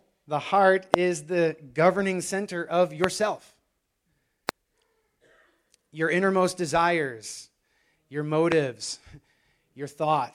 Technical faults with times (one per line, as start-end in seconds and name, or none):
0.94-0.96 loud pop
3.04-3.06 loud pop
4.49-4.51 loud pop
8.52-8.54 loud pop